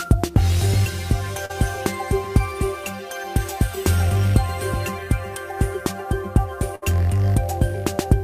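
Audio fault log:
Throughout: sample clock jitter. The converter's clock wanders by a few microseconds, so samples land slightly off time. The error tracks the waveform's slope. It adds a roughness about 25 dB below the sound, strongest on loud, bright passages, gone in silence.
1.45 to 1.51 s: short concealed packet loss. About 40 ms never arrived in time. The receiver extended the preceding sound to cover the hole, then blended back into real audio. It is heard as a brief smear or wobble.
6.75 to 6.84 s: burst of packet loss. About 60 ms went missing in a run. The receiver carried the last sound forward for roughly 64 ms, fading it as the gap went on. Playback then resumes further along, with that stretch absent.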